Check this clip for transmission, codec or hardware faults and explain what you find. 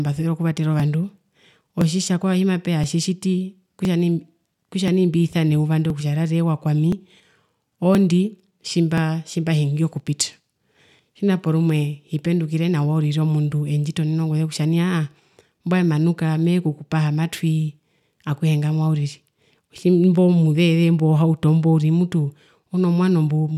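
There is one hardware-side fault: periodic USB or driver dropouts from 0.80 s to 8.98 s. A background task stalls the USB bus or audio driver every 1.02 s, and about 2 ms of the speech is skipped each time. About ten evenly spaced ticks result, audible only while there is signal.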